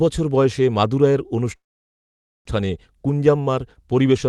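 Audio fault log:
1.55–2.47 s, call audio freeze: the speech stops and a brief fading continuation of the last sound gives way to about 0.85 s of silence, then the speech resumes exactly where it left off. This is likely packets stalling in transit until the jitter buffer ran dry, with the receiver stretching the final sound to cover the wait. Unlike a dropout, nothing is cut out. The rest of the clip is simply pushed about 0.9 s later, heard through a call path limited to roughly 12 kHz.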